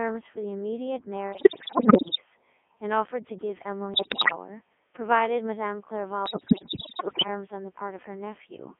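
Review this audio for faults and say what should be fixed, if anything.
The whole clip carries the Codec 2 vocoder's sound, heavily damaged: robotic, buzzy speech confined to about 250 Hz to 3.4 kHz, which fits the 3.2 kbit/s mode. The decoder rebuilds the voice from sine waves using only pitch, voicing, energy and a spectral envelope, so the original waveform is gone. Unlike ordinary low-bitrate codec smearing, the buzz is steady and synthetic rather than watery or swirly. Prevent it by sending the speech over a waveform-preserving codec at a higher bitrate.

Bit errors on digital voice radio hit from 1.32 to 2.21 s, 3.94 to 4.32 s, and 6.26 to 7.27 s, at roughly 15, 10 and 10 percent of bits respectively. Each corrupted frame gets a wrong pitch, level or spectral setting, so the voice suddenly leaps in pitch and loudness and dissolves into bleeps, warbles and gibberish. Dropouts or packet loss would leave gaps or repeats instead. 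Prevent it by improving signal margin at the coverage edge or adding stronger error protection.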